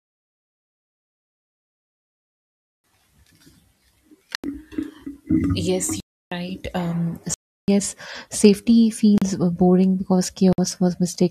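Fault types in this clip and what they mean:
block of digital silence: output samples were zeroed, likely from buffers not filled in time, cutting the speech five times for 37 to 341 ms, from clicks to clear holes.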